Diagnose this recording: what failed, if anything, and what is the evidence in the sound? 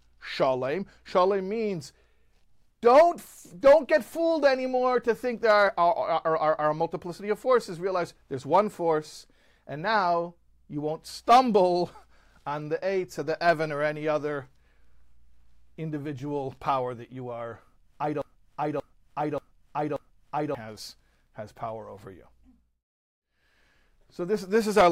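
A broken-record loop runs from 18.22 to 20.55 s in this speech. One 0.58 s fragment plays four times, back to back and identical. The player or stream likely stalled and kept resending its last held fragment. The speech due in that span is lost.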